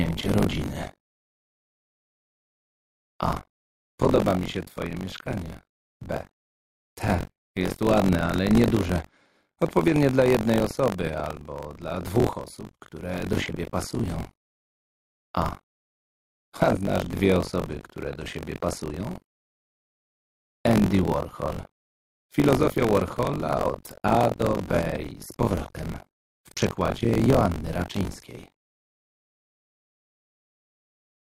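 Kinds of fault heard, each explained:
Buffer tearing: the writing program and the reading hardware have slipped, so they cross inside each buffer. About a fifth of each one repeats sound from roughly 40 ms earlier, with hard joins. The result is a constant robotic buzz at 46.9 Hz, which fits a 1024-sample buffer.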